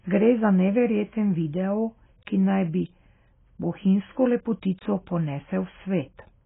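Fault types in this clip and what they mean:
AAC compression: the speech is dull and smeared throughout, with nothing above 3.7 kHz and a warbling texture, likely heavy AAC-LC coding near 16 kbps.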